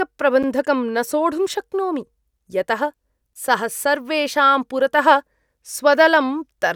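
At 0.43 s the speech cuts to silence for 8 ms, then carries on: a Bluetooth stall, likely from interference holding packets back until the headphones' buffer ran dry. It is a clean gap of silence, not a click or a smeared, concealed patch.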